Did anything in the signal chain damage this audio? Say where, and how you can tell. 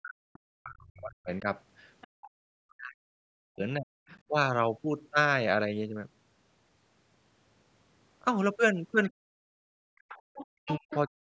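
Yes. Speech suppressed in double talk at 0.0–1.48, 2.05–3.92, 9.1–9.31 and 10.42–11.27 s: the speech dips by as much as 40 dB, likely the call's echo canceller ducking the talker during overlap.

Other side's voice leaking through at 2.01–2.3, 4.09–4.2 and 10.08–10.96 s: a second voice sits faintly under the speech, rising to about 10 dB below it at the end, likely residual loudspeaker echo in the call processing.

Background gated by the echo canceller at 9.59–10.08 s: the room sound drops by about 35 dB for half a second, then returns as call processing releases the microphone.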